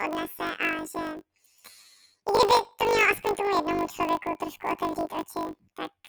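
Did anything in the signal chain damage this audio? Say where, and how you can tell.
Yes. At the buffer or sample-format stage, planar audio was read as interleaved: each 20 ms block of all-left-then-all-right samples was treated as alternating pairs. The whole speech clip carries a robotic buzz at the 50 Hz block rate, without a clear octave shift.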